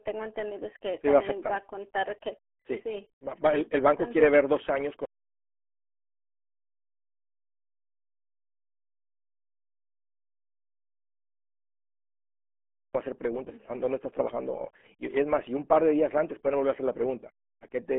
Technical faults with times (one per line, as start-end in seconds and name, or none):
0.00-17.98 RealAudio 14.4 codec
5.05-12.95 audio dropout to silence